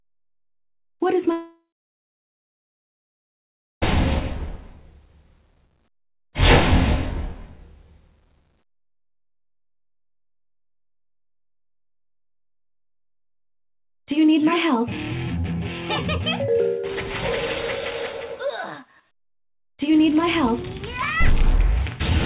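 The audio comes through a narrowband call path with nothing above 4 kHz, which fits G.711 A-law. From 1.32 to 3.84 s the sound stops. The last sound trails on as a fading buzz, then about 2.2 s of silence follows. Audio resumes with that stretch missing. The likely cause is a long network dropout.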